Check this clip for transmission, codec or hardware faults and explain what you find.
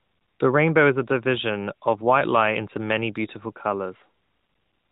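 No transmission, codec or hardware faults are present.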